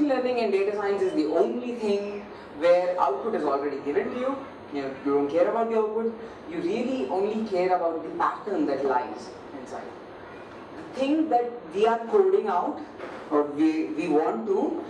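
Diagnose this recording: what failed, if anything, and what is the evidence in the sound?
Nothing stood out on listening to this recording; no stage of the chain shows a failure that can be heard.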